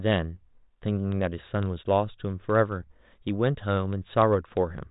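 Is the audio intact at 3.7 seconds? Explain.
Yes, the audio is intact at 3.7 seconds, with no fault at that moment.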